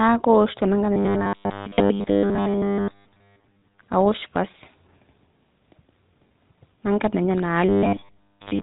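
Across the whole clip the speech has a buzzy, gravelly roughness and nothing above 4 kHz, the signature of the GSM full-rate codec. It rebuilds the voice from a vocal-tract model driven by thinned-out pulses, which fits a 13 kbps stream, and the damage is plainly audible.

From 0.93 to 3.81 s, and again from 7.69 s to the end, the speech turns into a rigid, metallic drone pinned at 100 Hz that still roughly tracks the words. This is robotic sound from repeated short buffers, likely caused by audio arriving too seldom. The software repeats the last 10 ms over and over, skipping most of the real signal.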